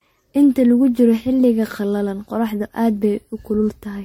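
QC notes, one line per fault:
throughout: generation loss, likely from about seven MP3 re-encodes near 60 kbit/s; stacked requantisation makes speech swirly and hollow, smears attacks, and leaves nothing above 16.5 kHz.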